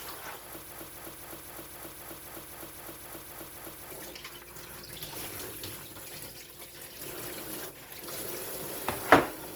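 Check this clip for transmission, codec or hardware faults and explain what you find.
One fault is present: a broken-record loop from 0.72 s to 3.91 s. A fragment of about 0.26 s repeats exactly, back to back, 12 times. The audio that belonged in those three seconds never plays. It is simply missing. The likely cause is a stall in the player, encoder or stream. Something stopped delivering new data and kept resending the last piece it held. The result is a stuttering, mechanical cycle that ends at 3.91 s.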